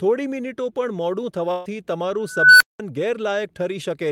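At 1.51 s a burst of packet loss cuts about 140 ms of speech. Missing packets are concealed by stretching the last received sound and fading it, so the gap is heard as a held, decaying buzz or hiss until 1.67 s. The speech then resumes with that stretch absent.

From 2.20 s an unstable filter takes over. A tone of roughly 1.5 kHz swells for about 400 ms as the recursive filter's output grows without bound and clips. The numbers then overflow and the output drops to silence for about 190 ms until the filter resets at 2.80 s.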